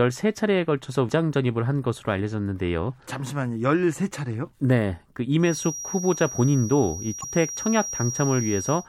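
At 1.09 s the speech gives a tick and a momentary mute of a few milliseconds, then carries on from a different point: a CD skip, the laser jumping to another turn of the disc spiral. From 5.37 s to the end, a thin, steady whistle near 5.7 kHz sits roughly 10 dB below the speech, swelling and fading slowly in level. This is a feedback whistle, likely a loudspeaker-to-microphone loop held just short of runaway. Between 7.20 and 7.24 s the audio jumps ahead. That points to a broken MP3 bit reservoir, likely after frames were cut out. The following frame reached back for borrowed data and decoded foreign bytes instead, a span that fits frames of about 26 ms.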